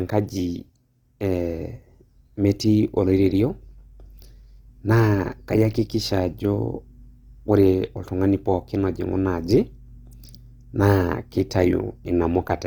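A speech recording with audible codec damage throughout. The speech has a rough, grainy texture rather than swirling holes, and tones turn noisy while the full bandwidth up to about 20.2 kHz remains. That points to Opus compression, likely in its music mode at a low bitrate near 24 kbps. There is also one pre-echo at 10.11 s. A short hiss of about 13 ms precedes a sharp attack, because quantisation noise sized for the loud onset spreads back into the quieter moment before it.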